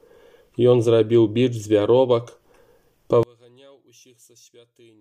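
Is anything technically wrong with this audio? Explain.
Yes, there's one problem. From 3.23 s to the end, the sound drops by about 33 dB into a faint remnant, likely one channel inverted, so the shared content cancels when summed to mono.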